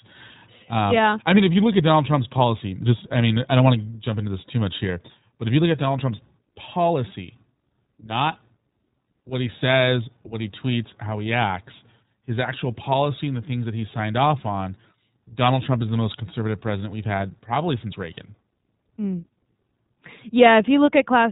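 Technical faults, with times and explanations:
Throughout, iLBC codec: the speech is band-limited, with nothing above 3.8 kHz, and carries plainly audible coding damage, a rough, synthetic edge. iLBC codes each 20 ms frame's excitation independently rather than predicting from the previous frame. The narrowband ceiling removes sibilance and airiness. The quality fits iLBC's 15.2 kbps mode.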